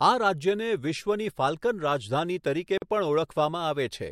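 At 2.78 to 2.82 s the speech drops into a sudden silence of about 43 ms, with smeared edges, then resumes exactly where it stopped. This is a gap at a join of encoded pieces: separately encoded segments were joined with their start delay and end padding left untrimmed.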